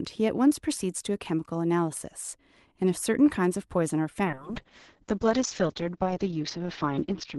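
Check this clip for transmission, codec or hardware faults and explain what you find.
One fault is present: a call bitrate drop from 4.25 s to the end of the speech clip. The audio arrives through an Opus call path whose top end reaches about 12 kHz. At 4.25 s the encoder is forced to spend far fewer bits, consistent with a fall from around 48 to roughly 7 kbps. The coding becomes coarse, so speech turns rough and watery, and the bandwidth narrows to 8 kHz, dulling it for the final three seconds. Packet loss would produce brief gaps or smeared fills. Here the degradation is continuous and steady.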